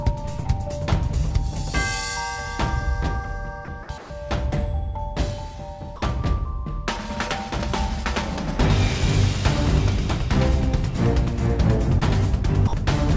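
Brief dropouts at 3.65–3.68, 3.83–3.89, 3.98–4.10, 5.96–6.02 and 12.67–12.73 s give way to steady comfort noise, likely sound dropped by the voice detector. At 11.99–12.04 s, short concealed packet loss briefly smears about 30 ms of missing audio, through a G.722-type path band-limited at 8 kHz.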